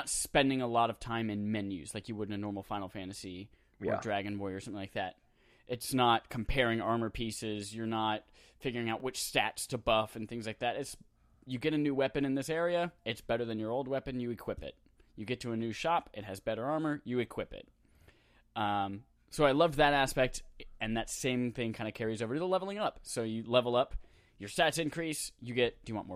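It's a speech clip with one corrupt frame decoded at 9.00 s, right between "not figuring out" and "which stats to buff". Damaged bits in a few compressed frames got played anyway, so there's a quick, quiet glitch, peaking somewhere around -40 dBFS, where misread data landed energy at the wrong frequencies.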